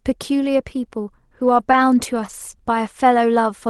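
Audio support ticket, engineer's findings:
Burst of lost packets rebuilt from error correction, 1.35–2.41 s: fourteen 20 ms frames played from low-bitrate in-band FEC copies. No gaps, but brief rough, noisy patches scattered through that stretch.

Short concealed packet loss, 1.71–1.75 s: one 20 ms frame missing with no usable copy, so the decoder extrapolated the previous sound and blended back, causing a brief smear or wobble.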